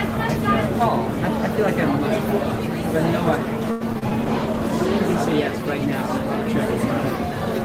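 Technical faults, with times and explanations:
3.71–4.12 s, repeated packet loss (robotic sound): four dropouts in quick succession, the longest about 92 ms. Each is patched by extending the preceding sound, so roughly a third of this stretch is synthetic fill. The repeated stitching gives a choppy texture with brief holes.
4.23–5.36 s, call bitrate drop: the sound turns coarser and loses top-end detail for about 1.1 s. This fits the encoder being throttled from roughly 32 to 16 kbps after a fall in estimated bandwidth, forcing cruder quantisation and a lowered bandwidth ceiling.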